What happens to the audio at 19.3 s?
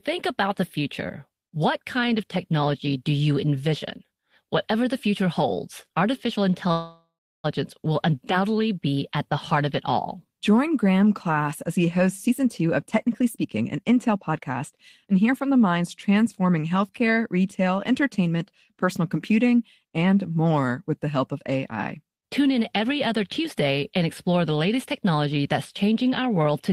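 Nothing goes wrong at 19.3 s; the speech carries on intact through that moment, with no dropout, click or distortion to be heard.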